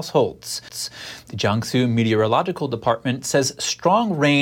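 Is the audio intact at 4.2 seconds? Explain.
Yes, the audio is intact at 4.2 seconds, with no fault audible at that moment.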